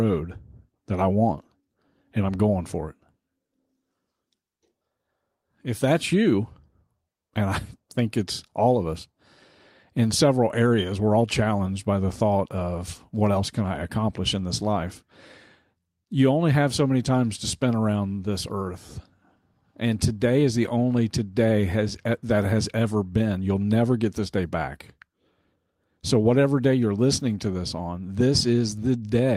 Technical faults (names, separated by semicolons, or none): none